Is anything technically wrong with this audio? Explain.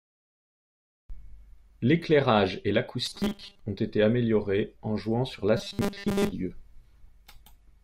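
Yes. The speech turns into robotic sound from repeated short buffers twice: from 3.06 to 3.60 s, just before "ont été améliorés en", and from 5.57 to 6.33 s, just after "améliorés en jouant sur". Most of the audio is replaced by a rigid, metallic buzz at 200 Hz. The likely cause is audio arriving too seldom, with a 5 ms stretch repeated to fill the gaps.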